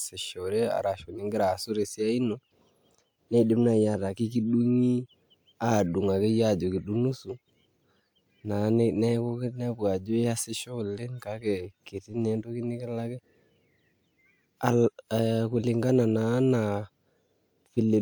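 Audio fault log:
Nothing stood out on listening to this speech recording.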